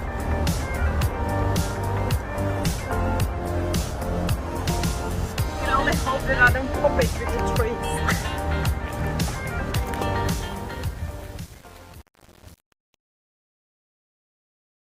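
A call bitrate drop runs from 2.46 to 4.81 s: the encoder falls from 48 to 17 kbps, so the sound turns coarse and muffled, with highs cut away. Truncation distortion on a fade follows from 10.26 s to the end. As the fade-out starts, a stage keeping only 7 bits without dither turns the quiet tail into gritty steps.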